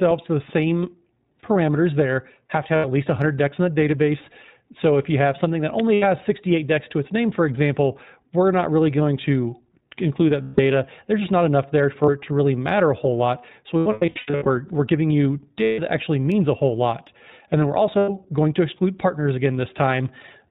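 Throughout, the speech carries the sound of the iLBC codec. Nothing passes above 4 kHz, and there is a plainly audible rough, slightly synthetic edge. This fits its 15.2 kbps mode with 20 ms frames, each coded without reference to the previous one.

Lost iLBC frames first appear at 2.76 s as an 80 ms gap. At 5.80 s a sharp snap sits on top of the audio, likely an electrical switching spike from a nearby switch or discharge arcing into the line. Just after "you have something that", at 5.94 s, another 80 ms loss follows.

Further losses come at 10.42 s (160 ms) and at 12.04 s (40 ms, between "just not enough there" and "it to really matter"). From 13.79 to 14.48 s about 480 ms is lost, scattered over 680 ms in runs of up to roughly 100 ms. The last two are at 15.64 s (140 ms, after "we're giving you") and 17.98 s (100 ms). Each gap is filled by the decoder repeating the last pitch cycle mixed with noise, heard as a held, buzzy vowel. 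The speech recovers immediately once good frames resume.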